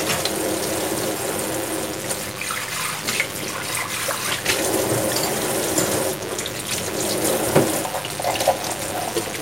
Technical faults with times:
0.00-9.42 DECT cordless phone buzz

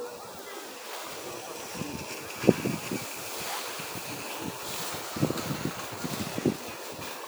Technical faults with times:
none

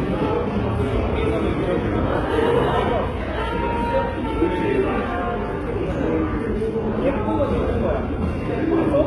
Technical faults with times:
0.00-9.07 HE-AAC compression

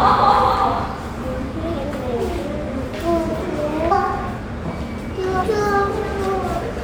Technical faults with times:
1.82 compressed frames skipped
3.90 compressed frames skipped
5.41 compressed frames skipped

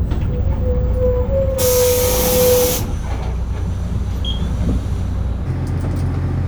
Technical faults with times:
5.46-6.48 section at the wrong speed

